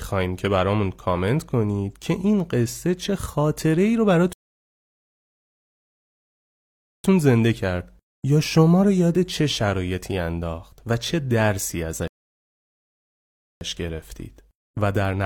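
Two rebuffering stalls: the player exhausted its downloaded audio at 4.33 s and 12.08 s, so the speech drops to silence for 2.7 s and 1.5 s, then resumes exactly where it stopped.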